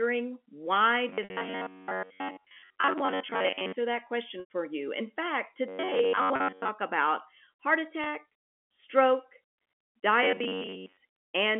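From 1.09 to 3.73 s, 5.68 to 6.69 s and 10.23 to 10.97 s the speech turns into a rigid, metallic buzz at 93.8 Hz, likely robotic sound from repeated short buffers: most of the real audio is skipped while a block of roughly 10.7 ms is looped. Packet loss with pitch repetition appears at 1.24 to 1.30 s (60 ms lost), 4.40 to 4.46 s (100 ms), 6.36 to 6.40 s (40 ms) and 8.04 to 8.06 s (20 ms). The last pitch period is repeated and faded, giving brief held, buzzy notes for the shorter losses, while the 100 ms gap fades into silence before the speech returns with a short cross-fade, over the narrow 200 Hz to 3.4 kHz G.711 telephone band.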